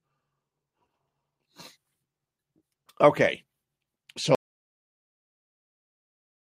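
Speech runs normally until 4.35 s, where an audio dropout to silence sets in and lasts to the end of the clip, about 2.1 s in all. The cut is abrupt and the gap is silent, with no room tone or noise floor underneath, so nothing spoken in that stretch survives. That pattern points to the input being lost while the recorder kept writing silence, likely through a disconnected device, a failed link or an accidental mute.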